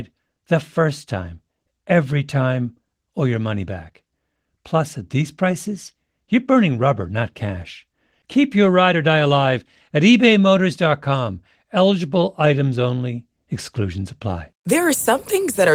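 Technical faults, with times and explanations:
No technical faults are present in this speech recording, which carries Opus voice compression in its hybrid mode at 20 kbps with the full audio band retained and only light coding wear to be heard.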